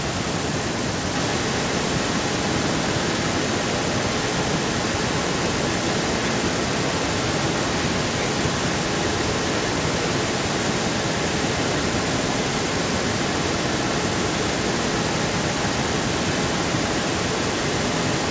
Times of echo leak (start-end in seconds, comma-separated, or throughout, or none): 0.03-18.31